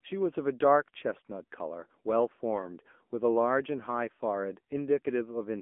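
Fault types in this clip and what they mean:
AMR narrowband mobile codec: present throughout the clip, this speech has been squeezed through the AMR-NB mobile speech coder, which samples at 8 kHz and rebuilds each short stretch of sound from a vocal-tract filter excited by sparse pulses. The line runs from about 200 Hz to 3.4 kHz, with nothing above 3.6 kHz. The coding damage is plainly audible, a buzzy, synthetic edge that fits a low bitrate near 8 kbps.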